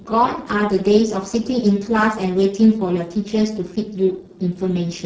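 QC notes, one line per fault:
Throughout: Speex codec, heavy damage. The speech sounds hoarse and grainy, which points to Speex run near its lowest quality, around 6 kbps. At that rate the CELP coder has too few bits to describe the excitation, so the natural voicing is replaced by a coarse, noisy approximation. On a spectrogram the harmonic striations look smeared and noisy rather than crisp. The waveform shows rough, irregular voiced cycles.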